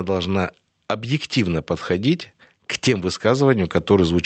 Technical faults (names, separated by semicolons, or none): automatic gain rising